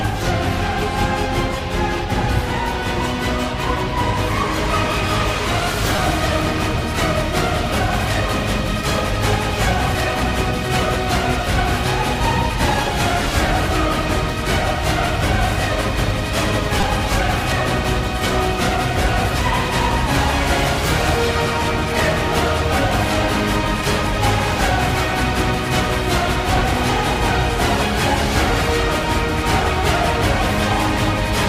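At 5.96 s and 16.81–16.83 s, a repeated buffer: audio arrived late, so one tiny slice, fitting a 5 ms buffer, replayed. Each sounds like a brief buzzy click.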